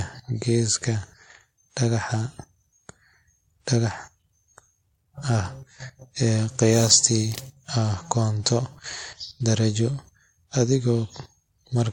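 From start to finish the speech carries the layered artefacts of transcoding between lossy codecs. Nothing is present above 16.6 kHz, and the artefacts of one encoder sit under a second, different set of coding artefacts. That points to a likely chain of a low-bitrate AAC-style encode re-encoded as WMA. A single lossy pass leaves one consistent artefact character, but here the second codec spends bits reproducing the first one's damage and adds its own.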